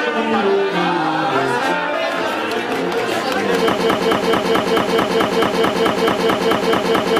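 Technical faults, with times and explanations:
3.79 s to the end, broken-record loop: a 218 ms fragment repeats exactly, back to back, 16 times, replacing the audio that belonged there, likely from a stalled player, encoder or stream resending its last fragment. Unlike echo, nothing fades or overlaps.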